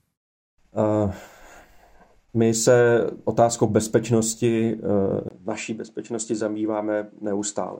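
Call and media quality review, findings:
Input switched to a poorer device, 5.29 s to end of clip. Symptom: 20 ms dropout, then duller, narrower sound with nothing above 10 kHz, level down about 5 dB, and a different background noise roughly 45 dB under the speech. Likely cause: capture path moved mid-recording to a second, lower-grade microphone with its own band limit, gain and noise floor.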